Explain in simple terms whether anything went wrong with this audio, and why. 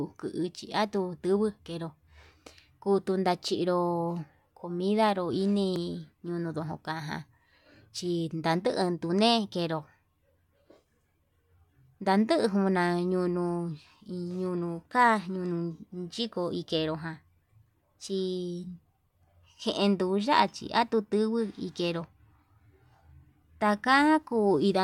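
Nothing went wrong that a listener would notice: nothing in the recording stood out as a problem at any point.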